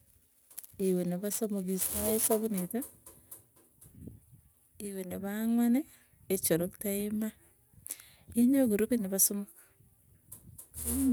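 From the start to about 2.61 s the speech carries crude rate conversion: samples were repeated by nearest-neighbour picking, which fits a 44.1 kHz to 48 kHz change. This leaves an inharmonic, gritty fizz roughly 15 dB down, tracking loud and bright syllables. A spectrogram shows faint aliased lines unrelated to the harmonics, and the waveform shows small stair-steps.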